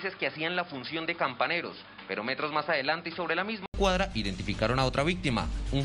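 From 0 to 3.74 s the sound is dull and band-limited above 5.1 kHz and somewhat quieter, then an 80 ms gap restores full bandwidth, likely an input switched to a poorer device rather than a filter.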